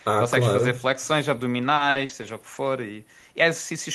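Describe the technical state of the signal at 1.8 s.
At 1.8 s you're inside a run of repeated packet loss (robotic sound), lasting from 1.75 to 2.57 s. The speech keeps dropping out in five short holes, up to 50 ms each, and the last sound gets stretched to patch them, so it comes across choppy with pieces missing.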